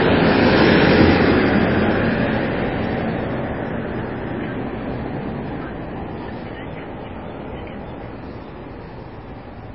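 Throughout, the audio stops dead above 5.5 kHz and sounds watery and swirly, likely MP3 compression at a very low bitrate stripping treble and dropping weak frequency components.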